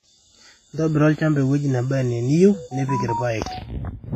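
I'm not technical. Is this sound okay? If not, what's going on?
No. Throughout the speech there's a ringing, washy quality with hiss that swells and fades along with the talking, and the highest treble is cut away. This is likely heavy WMA compression; unlike steady background hiss, this noise follows the voice itself.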